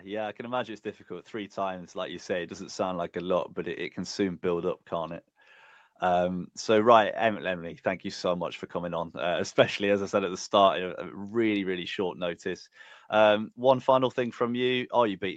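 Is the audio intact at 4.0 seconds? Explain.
No. At 4.0 s the automatic gain rising is under way, from 0.37 to 5.26 s just after "yeah I". The gain control, hearing a quiet input, lifts level about 9 dB gradually, so voice and background swell together, unlike an abrupt level step.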